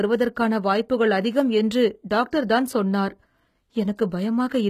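Throughout the speech, the upper spectrum is likely being regenerated by HE-AAC compression. Only the lower bands are properly coded, and the treble is rebuilt by copying those bands upward under a coarse envelope. The damage is plainly audible, consistent with a bitrate near 20 kbps: the top end sounds synthetic, with harmonics failing to line up across the crossover, and nothing at all above 14.9 kHz.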